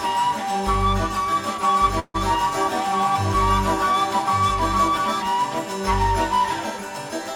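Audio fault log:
1.63–5.22 s, doubled audio track: a clean second copy, about 5 dB down and roughly a second late, starts and stops abruptly, likely captured twice via a slower path.
1.99–2.16 s, call audio freeze: the sound stretches into a fading buzz, about 20 ms of it silent, then resumes 147 ms late with nothing lost, likely a starved jitter buffer.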